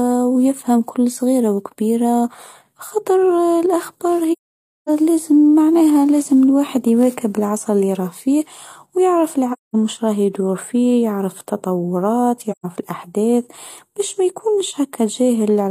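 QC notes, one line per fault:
4.32–4.90 s, 9.52–9.76 s and 12.51–12.66 s: AAC frame loss with muting. Lost frames are zeroed, so the speech falls silent for 0.55, 0.21 and 0.13 s. The overlapping windows fade it out and back in, leaving soft edges, unlike a hard dropout.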